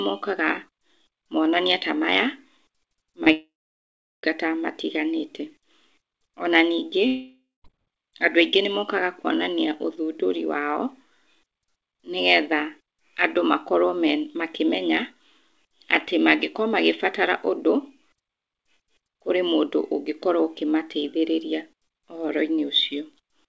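At 3.24 s there is a brief smear lasting about 20 ms, where the sound is carried on from its last moment and then blends back in. This is short concealed packet loss: a packet arrived too late for the decoder, and the receiver patched the gap by extending what came before.

Right after, from 3.32 s to 4.25 s, the sound turns into a fading buzz or hiss and then roughly three-quarters of a second of silence before the audio resumes, with that stretch missing. This is a long network dropout, likely caused by packets failing to arrive. Concealment can only stretch the last sound so far before it gives out.

A shorter one follows from 7.07 s to 7.66 s. The fading continuation runs longer here, leaving about a fifth of a second of silence before the sound returns, again with the missing part gone.

Throughout, nothing is heard above 8 kHz, which fits a G.722 call codec at around 64 kbps.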